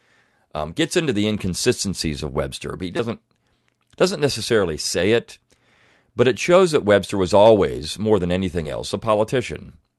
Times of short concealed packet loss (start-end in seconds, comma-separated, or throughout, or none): 8.63-8.67